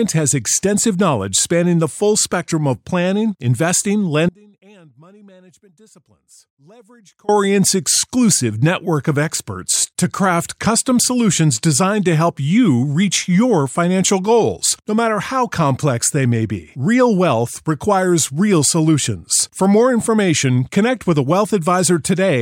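At 4.29 s the speech drops out abruptly and stays gone until 7.29 s, a 3.0 s audio dropout to a faint residue. The likely cause is a break in the incoming signal while the path after it stayed live. The gap isn't true digital silence: a faint trace of the sound remains, roughly 30 dB below normal level. That residue separates it from a hard mute, and the instant cut and return separate it from a pause or fade.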